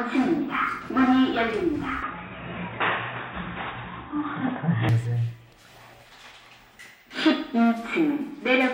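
From 2.03 to 4.89 s the sound turns dull and boxy, with nothing above 3.8 kHz, a level shift of roughly 5 dB and a faint new background noise, then clears again, with no gap at either change. The likely cause is the input switched to a poorer device.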